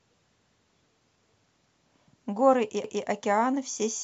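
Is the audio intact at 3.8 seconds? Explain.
Yes, the audio is intact at 3.8 seconds, with no fault to be heard at that point in the speech.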